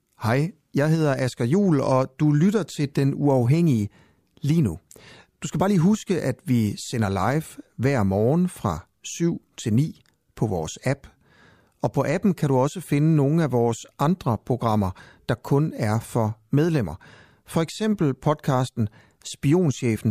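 Listening closely to the speech recording, nothing stood out as a technical fault at any point.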